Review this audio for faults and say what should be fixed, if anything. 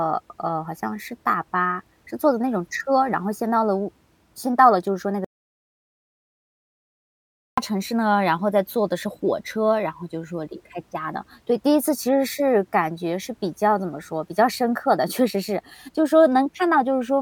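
An audio dropout to silence runs from 5.25 s to 7.58 s. The speech cuts off mid-flow and returns after about 2.3 s of silence, with no room tone. The input was likely lost while recording continued. Monitor input levels and secure connections during capture.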